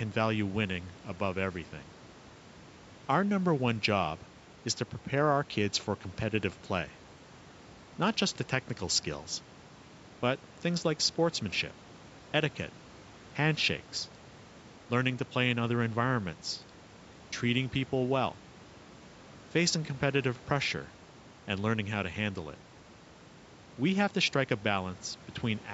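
A speech recording with no technical faults to report. The call's microphone processing trims the deepest bass and leaves nothing above 8 kHz, and a low room noise sits about 25 dB below the speech.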